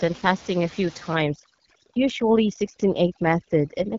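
From the start, the speech carries AMR wideband (HD Voice) codec damage. Nothing sits above about 7.1 kHz. The top band is filled with shaped noise, not real detail. The speech sounds rough and raspy, which points to one of the lowest rates, around 8.85 kbit/s.

At 1.15 s, after "fasting a few", overdone noise removal begins and runs to the end. The room noise, about 17 dB below the speech, drops and breaks up into twinkling specks. Quiet parts of the speech are cut along with it.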